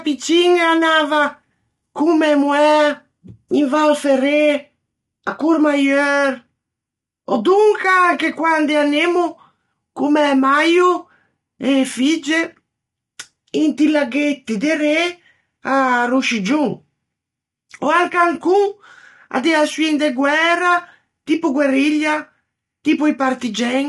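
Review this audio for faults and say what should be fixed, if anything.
The speech sounds rough and grainy from start to finish. Noise fills the gaps between the voice's harmonics. Nothing is present above 11.6 kHz. The damage is plainly audible. The likely cause is low-delay AAC compression, the AAC-ELD kind used in video calls. Its short frames cannot separate closely spaced harmonics well, so detail smears into noise. The level of damage fits a bitrate of around 32 kbps. To prevent it, encode at a higher bitrate or use a longer-frame codec.

Sample clock jitter is also present throughout. The converter clock wobbles by roughly half a microsecond, so each sample is taken slightly early or late. The timing error does the most harm where the waveform changes fastest. It adds a faint hiss and roughness about 50 dB below the speech. It grows on loud and bright syllables and disappears in the pauses. 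To prevent it, clock the converter from a stable, low-jitter source.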